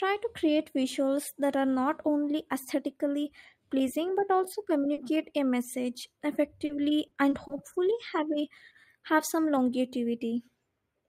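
Speech with five short concealed packet losses: after "aesthetically pleasing but also" at 4.93 s, after "a message" at 6.65 s, then at 7.07, 7.29 and 7.47 s. Each 20 to 40 ms gap was filled by extending the preceding sound, so it smears rather than dropping to silence.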